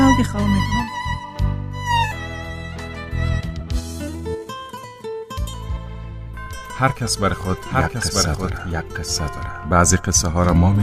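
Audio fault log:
2.11 to 2.13 s, skip ahead: playback jumps straight forward with no gap and no fill, leaving out roughly one and a half seconds of audio. The two sides of the cut are butted together, so the sound lurches abruptly mid-flow. Unlike a dropout or concealed loss, nothing silent or smeared marks the spot, and unlike a speed-up nothing is gradual. A whole chunk simply vanishes, as happens when a receiver discards queued audio to catch up.
3.41 to 6.84 s, jitter buffer speed-up: over this stretch the audio runs at about 114% of normal speed while its pitch stays unchanged, trimming roughly half a second in total. The receiver had too much audio queued and shaved off many tiny pitch-period pieces in succession to shrink the delay. It sounds hurried rather than chipmunk-like, which separates it from a resampling error, and it is spread evenly instead of landing as one jump like the skip earlier.
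7.04 to 9.84 s, doubled audio track: a second full-band copy of the same audio plays along about a second behind and about 5 dB quieter, switching in and out abruptly at both ends. It carries no decay or room colour, so it is not reverberation or a real echo, and its delay is far too long for comb filtering. The likely cause is the signal being captured twice, once through a slower path, with both mixed together.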